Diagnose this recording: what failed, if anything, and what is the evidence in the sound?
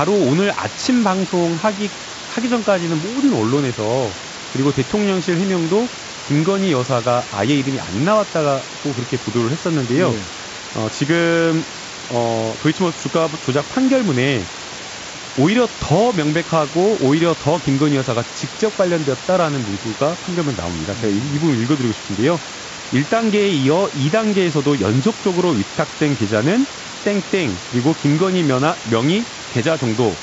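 Nothing failed here.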